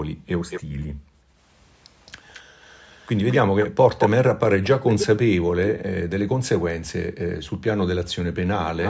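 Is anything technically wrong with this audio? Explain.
Yes, there are two kinds of fault, both typical of a speakerphone call.

Background gated by the echo canceller: the room sound drops away abruptly three times. From 0.15 to 1.39 s it dips in and out for a total of roughly 0.7 s, falling by up to about 40 dB. It drops again at 2.42 to 2.57 s (about 35 dB) and 5.73 to 5.84 s (about 40 dB). Each time, the echo canceller hears the far end playing through the loudspeaker and clamps the microphone down hard, so the ambience vanishes until it releases.

Echo leak: a delayed ghost of the speech trails the main signal. At 0.50 to 0.61 s it is a brief, faint scrap, roughly 10 dB under the speech, lagging by 220 ms. From 2.06 to 5.07 s it is a longer and much more prominent stretch at the same 220 ms delay, only about 5 dB below. At 8.67 s it appears again and runs to the end, now 311 ms behind and faint. 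The likely cause is a loudspeaker-side echo canceller that failed to subtract all of what its microphone picked up, so the leftover echo was sent back down the line.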